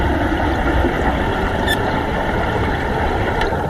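A short recording of everyday sounds with nothing technically wrong to point out anywhere in it.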